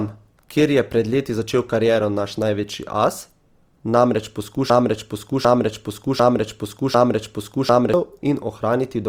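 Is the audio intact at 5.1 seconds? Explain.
No. At 5.1 seconds the sound sits inside a broken-record loop running from 4.70 to 7.94 s. A fragment of about 0.75 s plays four times, back to back. The audio that should have filled that span never arrives. The cause is likely a stalled player or stream resending its last buffer.

Opus compression also colours this moment. The full band is kept, up to about 20.3 kHz, but the sound is plainly grainy and rough. That fits Opus music mode at a rate around 24 kbps, filling starved bands with noise.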